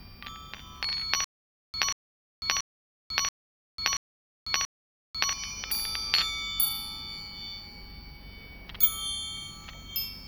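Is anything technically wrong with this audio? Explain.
Yes: there is a stutter with silent gaps from 1.24 to 5.33 s. Playback likely stalled and replayed its last fragment at each retry, so one 185 ms burst recurs six times, every 681 ms, with dead silence between and the intended audio lost.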